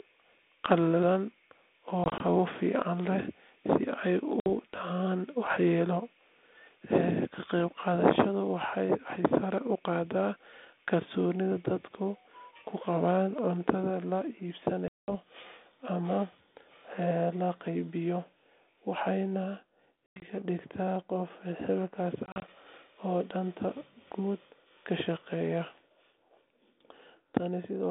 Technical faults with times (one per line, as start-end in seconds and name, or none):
2.04-2.21 packet loss on an ADPCM call
4.40-4.47 packet loss on an ADPCM call
14.88-15.12 packet loss on an ADPCM call
20.06-20.26 packet loss on an ADPCM call
22.26-22.48 packet loss on an ADPCM call